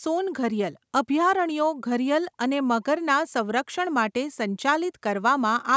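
No technical faults can be heard in the speech, which carries the ordinary signature of call microphone processing, with the deepest bass trimmed away by its high-pass filter and no content above 8 kHz.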